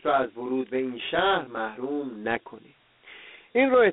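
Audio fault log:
throughout, Dialogic VOX ADPCM: the speech was coded as 4-bit adaptive differential samples at about 32 kbps, which fits an 8,000-sample-per-second stream. The band runs from 200 Hz to 3.6 kHz with nothing above 3.9 kHz, and a gritty hiss tracks the speech.
0.00–2.25 s, channel delay (comb filtering): one channel runs around 20 ms late and is summed to mono with the other. Shared content cancels at evenly spaced frequencies from near 20 Hz upward, so the speech sounds rough or slightly doubled until the delay ends.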